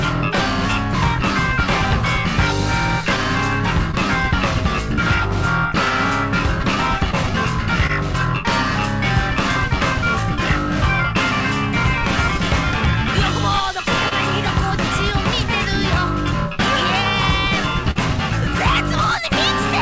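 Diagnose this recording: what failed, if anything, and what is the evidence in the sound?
Short concealed packet loss at 3.91 to 3.95 s, 7.11 to 7.15 s, 7.87 to 7.91 s, 14.09 to 14.13 s and 17.91 to 17.97 s: a network-stage fault. Each gap is a brief smear or wobble where the receiver extended the preceding sound to cover missing audio before blending back. Four gaps are about 20 ms, which fits a single lost packet. The last is about 40 ms, which fits two, and it smears longer. This all sits within a G.722 call path whose band stops at 8 kHz.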